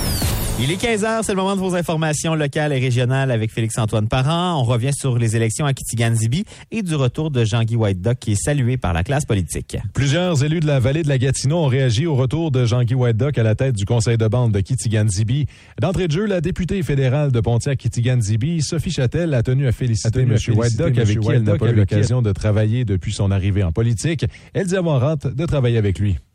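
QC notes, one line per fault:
20.05–22.07 s, doubled audio track: a single full-band copy of the sound trails the original by roughly 0.7 s at a few dB lower, starting and stopping abruptly. Unlike an echo, it has no decay or room colour, likely from a second capture path.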